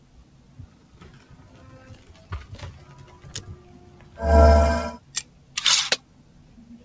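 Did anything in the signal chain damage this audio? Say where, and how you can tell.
Yes. A speech-tuned noise suppressor in the call processing stayed active throughout the clip and treats steady, sustained parts of the sound as noise. Onsets pass through, but held portions, ambience and decaying tails are pulled down, with gain swinging by around 10 dB. The sound pumps and thins as it sustains. The call codec path, audible in the band limit with nothing above 8 kHz, is not the source of this damage.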